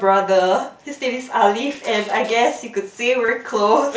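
A speech clip with a barely noticeable hiccup at 1.74 s and a short buzzy, held tone with a slight warble from 3.26 to 3.28 s. This is concealed Bluetooth headset packet loss: the receiver patched missing packets by repeating recent waveform, the second gap fitting a run of about three lost packets, all over light mSBC graininess.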